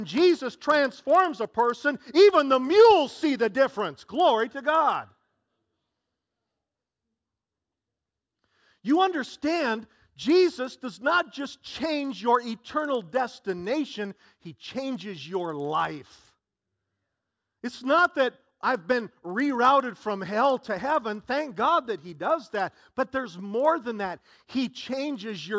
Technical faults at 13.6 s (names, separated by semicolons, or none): resampler restarted on every block